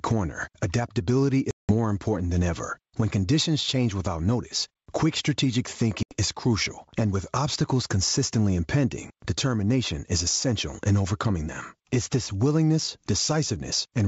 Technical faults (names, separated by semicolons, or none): gain pumping; packet loss on an ADPCM call